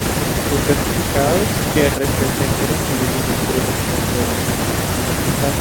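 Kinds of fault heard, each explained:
No technical fault can be heard anywhere in this speech recording. There is nothing to list or explain for it.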